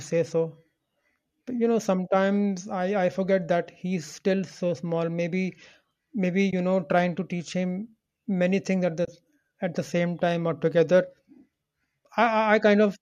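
At 6.51 to 6.53 s, and again at 9.05 to 9.08 s, the speech drops out briefly. These are AAC frame losses with muting. The decoder zeroed the missing spectrum, and the overlapping windows faded the sound out and back in. The first gap is about 20 ms, which fits two short low-delay frames. The second is about 30 ms, which fits three. Each sounds like a soft-edged hole. The short frames point to the likely use of AAC-ELD.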